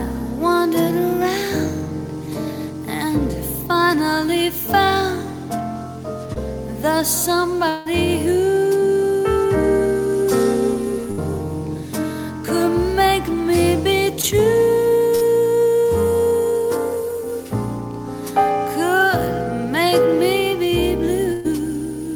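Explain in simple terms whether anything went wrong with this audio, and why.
Short concealed packet loss happens at 6.33 s and again at 14.22 s. Each time, about 20 ms of audio failed to arrive in time. The receiver covered the hole by stretching the sound just before it, then blended back into the real audio. The result is a tiny smear or wobble rather than a gap, and a very short sound could slip away unnoticed.

Long network dropout is the likely cause of the disturbance from 7.69 to 7.87 s. About 160 ms of audio is missing, and the receiver fills the whole stretch with a continuation of the last sound. That filler is a held buzz or hiss, and it never drops to silence before the real audio returns. When the audio comes back, it has moved on, and whatever fell in that gap is lost.

Burst of packet loss occurs at three points. From 11.11 to 11.20 s and from 15.15 to 15.23 s, about 60 ms goes missing each time. 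From 21.33 to 21.46 s, about 120 ms is lost. In each case several chunks of audio in a row never made it through. The receiver kept repeating the last sound and let it fade, so you hear a brief held buzz or fading hiss. The audio then jumps ahead, skipping the part that was lost.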